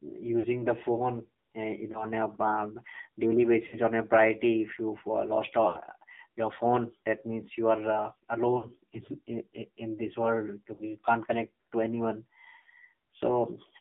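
The whole speech clip passes through the AMR narrowband mobile codec. The band runs from about 150 Hz to 3.7 kHz, with nothing above. Vocal-tract modelling with few pulses sounds plainly buzzy and synthetic, which fits a low mode near 7.4 kbps.

Lost AMR speech frames follow. The decoder repeats the last good settings with falling gain. Drop-outs start at 0.40 s, just before "the phone", and at 1.92 s, 3.68 s before "on a", and 5.68 s before "your phone that means". More follow at 8.58 s, 10.74 s and 12.60 s. Each is a brief smeared dip or warble. The longest gaps, at 5.68 s, point to about 80 ms of missing audio.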